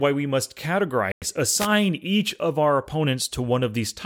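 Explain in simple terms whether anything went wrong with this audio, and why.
At 1.12 s, right after "we must", the audio drops to silence for about a tenth of a second and resumes at 1.22 s. That sounds like a Bluetooth stall: radio interference likely delayed the audio data, the headphones ran out of buffered sound, and playback paused until the data arrived.

From 1.58 to 1.68 s, just before "each of our", there is a short burst of hiss and static. This is a wireless microphone noise hit: the microphone's radio signal briefly faded as reflections cancelled it, letting the receiver's own noise rise above the speech.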